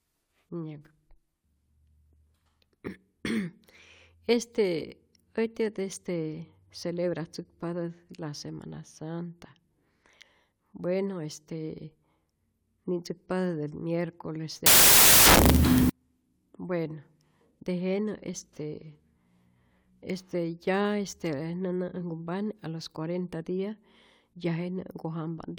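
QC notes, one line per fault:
14.66–15.90 s, samples built from the wrong bytes: for about 1.2 s the speech collapses into loud, harsh broadband noise, because each sample's bytes are misassembled and the rapidly changing low bits become the dominant part of every value. Unlike ordinary noise or clipping, it comes from the sample values themselves being rebuilt wrongly.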